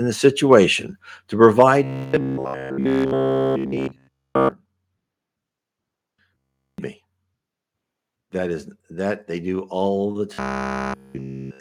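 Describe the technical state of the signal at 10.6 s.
At 10.6 s the speech has robotic sound from repeated short buffers. It runs from 10.34 to 11.60 s, right after "they do all the". New audio likely arrived too seldom. The last short slice was looped throughout the span instead. This forces a rigid, metallic buzz at 66.8 Hz, which fits a slice of about 15 ms.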